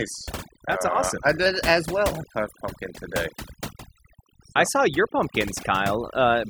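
Overdone noise removal runs the whole way through: the denoiser is clamping bands near its noise estimate, so the background drops and breaks up into twinkly specks. Right after "uh awesome I", from 1.46 to 3.16 s, everything runs about 5.2% fast and rises 88 cents, nearly a semitone, then snaps back down, most likely a drift correction step.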